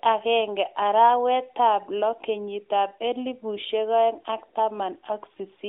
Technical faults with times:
none

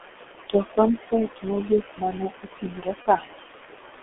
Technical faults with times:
0.00-4.02 noise suppressor artifacts
0.00-4.02 G.723.1 codec
0.98-1.14 speech cut by the noise suppressor
2.29-3.43 speech cut by the noise suppressor
3.02-3.07 VoIP packet loss concealed by the speech codec

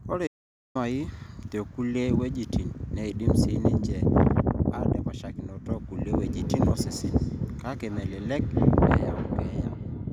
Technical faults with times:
0.27-0.75 audio dropout to silence
6.10-10.12 feedback echo between two devices

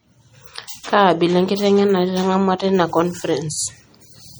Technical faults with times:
0.00-4.39 MP3 compression

